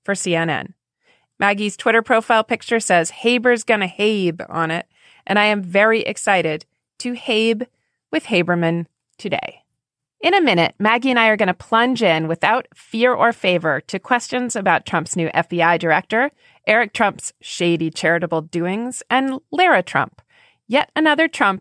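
No technical faults can be heard in this speech recording. At no point does anything in the audio call for a fault to be described.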